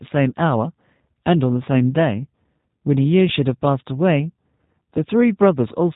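From start to end, G.729 codec damage is plainly audible: the speech sounds buzzy and synthetic, with nothing above a 3.8 kHz cut-off, a roughness plain low-pass filtering wouldn't add.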